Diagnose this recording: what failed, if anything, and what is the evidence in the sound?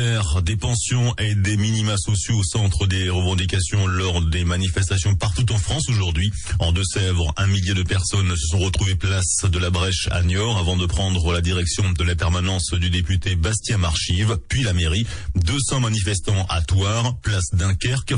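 The codec stage failed. The whole clip has a watery, swirling quality, which is likely MP3 compression. The damage is plainly audible and fits a low rate near 40 kbps. Starved of bits, the encoder drops weak frequency lines frame by frame.

Pre-echo, also from the codec, is heard at 0.59, 15.44, 16.47 and 17.22 s. Each attack has a hiss of about 21 to 30 ms, roughly 12 to 13 dB above the floor. This points to long blocks of about 52 ms and no switch to short blocks.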